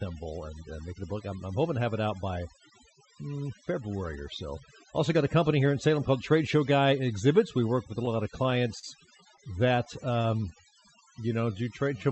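Across the whole clip, overdone noise removal set far too aggressively has been gating individual frequency bands down to almost nothing wherever they sat close to its noise estimate. The background drops and breaks up into twinkling specks, and the quieter parts of the speech were taken too.

From 8.05 to 10.53 s, starting just after "work with a", packets kept reaching the receiver late, so its jitter buffer repeatedly ran dry. This produces repeated stalls (stutter). The receiver bridged each gap by extending the last sound, about two dozen times, with the longest hold around 35 ms. Those holds add up to roughly a quarter of a second, about 11% of the span, so the speech drags and stutters even though nothing is lost.

From 10.55 s to the end, a jitter buffer slow-down begins. With its reserve run low or its target delay just raised, the buffer built up a reserve by repeating single pitch periods and slivers of pauses many times over. 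That adds about 196 ms and plays this last stretch at 88% speed with the pitch unchanged, so sounds are drawn out.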